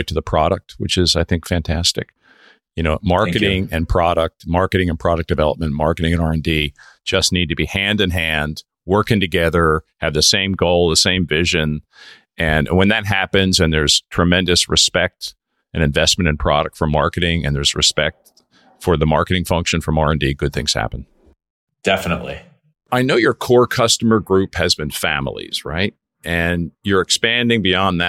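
A speech recording with CD scratch ticks: a disc blemish exceeded error correction on successive rotations, so the player concealed damaged samples, leaving three brief ticks, the longest around a millisecond, between 15.28 and 15.77 s.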